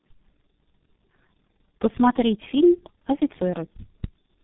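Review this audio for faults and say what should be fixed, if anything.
Throughout the clip there's tandem speech coding. The speech sounds like it was squeezed through a low-rate coder, decoded, then coded again by a second one, so each pass chews on the last one's damage. That leaves it rough, warbly and muffled, with nothing above 3.8 kHz. The roughness fits two passes through something like G.723.1 at 6.3 kbit/s with a plain G.711 link between them. To prevent it, keep the call in one codec end to end, or pass the coded stream through untouched, rather than decoding and re-encoding at each network border.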